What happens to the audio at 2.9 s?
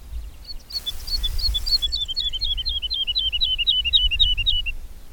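Nothing goes wrong at 2.9 s; the audio plays through that moment intact, with no dropout, click or distortion.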